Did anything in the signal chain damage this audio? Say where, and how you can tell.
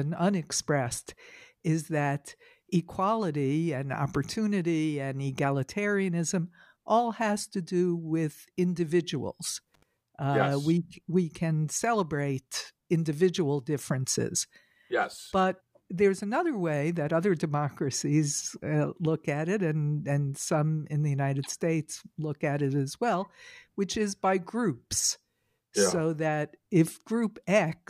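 Yes, in the analogue wiring. An intermittent contact, a loose cable or plug briefly losing connection, opens the line at 9.74 s and restores it by 9.83 s, an open stretch of about 72 ms. The speech drops out abruptly, with crackle as the contact breaks and remakes, and a faint hiss remains underneath. The ragged edges and residual noise point to a physical connection fault rather than a digital dropout.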